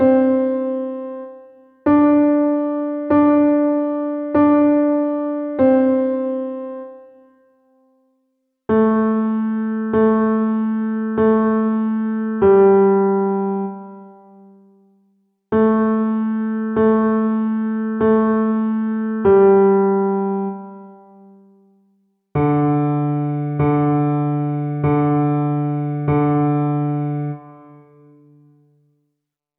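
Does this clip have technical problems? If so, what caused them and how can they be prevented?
No, there are no technical faults to hear anywhere in this clip. With nothing going wrong, there is no cause to trace and nothing that needs preventing.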